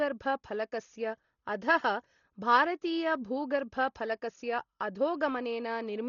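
Throughout the speech, nothing is present above about 6.9 kHz, so the sound is dull and muffled, with a rough, fluttering noise clinging to voiced tones. The likely cause is heavy Dolby Digital compression at a very low bitrate, which fits about 32 kbps: the encoder narrowed the band and left many frequency lines to decoder-filled noise.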